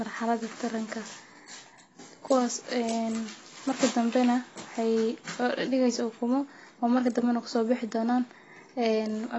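Throughout, nothing reaches above 8 kHz and the speech sounds dull and warbly, likely AAC compression near 24 kbps. The warble separates it from simple low-pass filtering.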